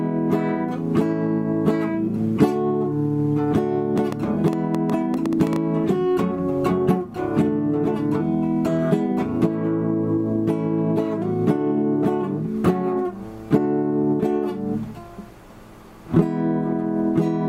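Interference from nearby equipment or a faulty connection or power supply is the likely source of a train of clicks from 3.98 to 5.57 s: about fifteen similar pulses at an uneven pace near 7.6 per second, popping out roughly 10 dB above the surrounding audio.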